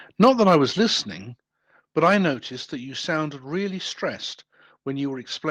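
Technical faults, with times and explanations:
0.23–0.56 s, microphone overload: the loudest stretch of speech turns harsh and crackly, its peaks flattened against a hard ceiling. The likely cause is input gain running about 4 dB too hot, so a small share of samples had their tops sheared off at the converter.
0.24 s, 1.23 s and 2.34 s, microphone volume stepped down: speech and background drop suddenly in level, by about 3 dB, 5 dB and 4 dB. This is likely the call software cutting the device's input gain in single steps, with the first step arriving right inside the distorted peak.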